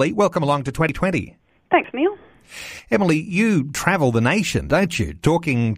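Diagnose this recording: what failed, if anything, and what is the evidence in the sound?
The recording skips at 0.89, 1.84, 3.75 and 4.70 s. Each time, roughly a twentieth of a second of speech vanishes and the two sides butt together with no gap. This is audio missing between chunks at the driver or buffer stage, likely caused by a recorder working in one-second chunks and dropping a short slice at each handover. On a waveform each join shows as an abrupt discontinuity. On a spectrogram it appears as a thin vertical seam where the harmonics jump.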